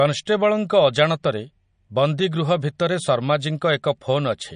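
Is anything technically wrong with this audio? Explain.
Yes. Throughout the speech there is plainly audible damage that is likely MP3 compression at a low bitrate, around 40 kbps. Short of bits, the encoder discards the treble and drops weak frequency lines frame by frame, giving a watery, swirly texture. A spectrogram shows a hard ceiling with nothing above 10.1 kHz and blotchy, flickering holes below it.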